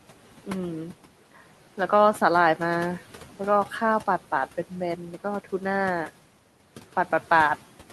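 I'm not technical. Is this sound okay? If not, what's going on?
No. Throughout the speech there are noise suppressor artifacts: a cleanup process keeps turning the quiet room noise down between words and letting it back up under them, so the background pumps instead of staying steady, unlike ordinary room noise.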